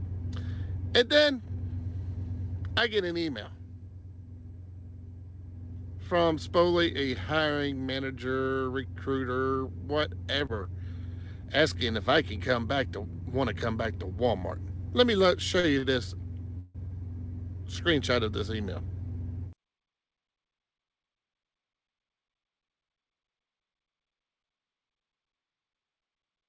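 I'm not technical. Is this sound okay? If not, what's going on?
No. The audio passed through an internet call connection, whose codec leaves nothing above 8 kHz, and it shows three kinds of network fault.

Short concealed packet loss, at 10.46 to 10.52 s: about 30 ms of audio never arrived in time. The receiver covered the hole by continuing the previous sound for roughly that long, then blended back in. This is heard as a brief smear, and what was lost there is gone.

Short stall from a late packet, twice: at 15.60 to 15.67 s and at 15.78 to 15.86 s. Each time a packet arrived late, so the receiver stretched the last sound for 34 ms and then 45 ms while waiting. Nothing is lost, but the sound is held too long.

Call audio freeze, at 16.58 to 16.89 s: the sound stops moving forward and the last moment is drawn out for about 170 ms, with no silence in it. This was likely caused by packets held up on the network. 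Afterwards the audio resumes from where it stopped, so a pause has been inserted rather than content removed.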